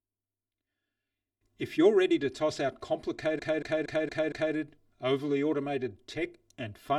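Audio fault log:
Throughout: channel delay (comb filtering). A lag of about 3 ms cancels evenly spaced frequencies from near 150 Hz upward, leaving the speech hollow and phasey.
3.35–4.51 s: repeated frames. A 232.2 ms block plays again five extra times, stuttering and adding 1.16 s.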